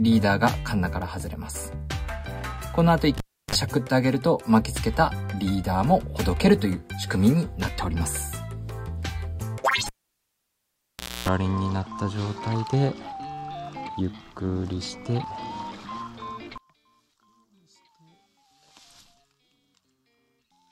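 At 3.18 s a cable is pulled and plugged in. A pop cuts the sound to near silence for about 0.33 s, then a 45 ms burst of 50 Hz mains buzz sounds while only the plug's tip makes contact, and a second pop brings the audio back at 3.55 s. The same fault recurs from 9.86 to 11.28 s with a longer gap of about 1.37 s and a 0.27 s buzz, this time at 60 Hz. That hum between the two pops sets this apart from a plain digital dropout, which would fall silent cleanly.

From 16.58 s to the end, the level drops by about 28 dB, and what remains is a faint copy of the full sound. The most likely cause is one channel inverted, so that material common to both channels cancels when they are summed to mono and only their difference survives. A simple gain drop would instead keep the centre and low end intact.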